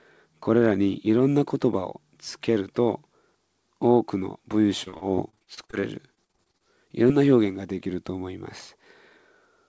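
Speech, carried over a call link with nothing above 8 kHz. From 4.84 to 6.62 s there is repeated packet loss, which gives a robotic sound. About twenty gaps, the longest 49 ms, are patched by stretching the last sound. Roughly 29% of that span is filled in, so it turns choppy. Then, from 7.08 to 7.12 s, comes a short concealed packet loss. About 20 ms of audio went missing. The receiver bridged it with continued sound, leaving a brief smear or wobble before the real signal returns.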